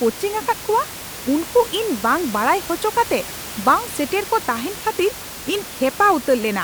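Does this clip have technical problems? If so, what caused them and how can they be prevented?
No, nothing stood out on listening to this speech clip, and the room noise, about 14 dB below the speech, is part of the recording itself rather than a problem with the system.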